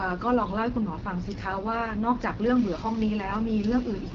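Speech, coded throughout with the AMR wideband (HD Voice) codec. The codec damage is plainly audible. The voice has a rough, raspy edge. That roughness points to one of the codec's lowest rates, around 8.85 kbit/s. The model spends too few bits on the pulses that drive its vocal tract filter. Nothing is heard above about 7.1 kHz. The band up to 6.4 kHz is coded from the model. The top strip up to 7 kHz is filled with shaped noise.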